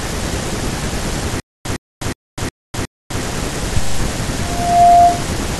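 From 1.40 to 3.21 s the speech breaks into a stutter with silent gaps, most likely because playback stalled and each retry replayed its last buffered fragment before running dry. A 110 ms burst of the same speech comes back five times at an even 363 ms pace, each followed by about 253 ms of dead digital silence. Whatever should have played across that stretch is simply missing.

At 4.40 s a microphone starts picking up the loudspeaker it feeds, and the loop gain tips above one at 697 Hz. That frequency keeps reinforcing itself, so a loudspeaker feedback squeal rises out of the speech over roughly 0.4 s. It reaches around 10 dB louder than the speech and lasts until it cuts off at 5.28 s.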